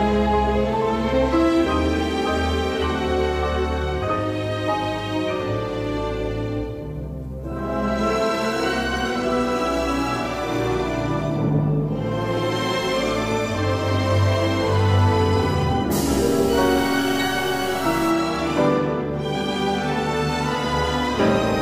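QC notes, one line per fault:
16.09–18.10 s, stuck bit: a harsh, buzzy grit rides on the sound for about two seconds, and any quieter moments inside that stretch fill with a steady noise rather than falling silent. This is likely one data bit frozen at a fixed value, so roughly half the samples are pushed off by that bit's weight, a step of around -35 dBFS. This is high enough to make the distortion coarse and the background noise clearly audible.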